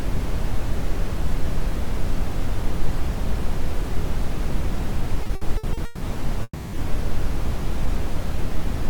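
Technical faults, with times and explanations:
5.23–6.03 s, repeated stalls (stutter): six late-packet gaps, longest 160 ms, filled by continuing the last sound; spectrogram shows smeared, repeated frames covering nearly half the span.
6.43–6.75 s, call audio freeze: 300 ms held-over buzz fading to about 40 ms of silence, likely from packets delayed in transit; waveform shows a decaying block then a flat gap.
7.86–8.88 s, jitter buffer slow-down: repeated pitch periods add 62 ms, playing at 94% speed with unchanged pitch; spectrogram harmonics stay level while features stretch slightly.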